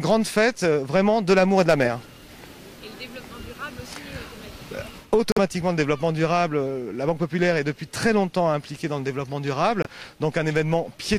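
The audio drops out twice: a gap of silence from 5.32 to 5.39 s and a shorter one from 9.82 to 9.87 s. After each hole the sound returns further along, as though it had kept playing underneath. This is likely a Bluetooth dropout, where audio packets failed to reach the headphones in time and were discarded. The lengths fit the loss of roughly two codec frames in the first gap and one in the second.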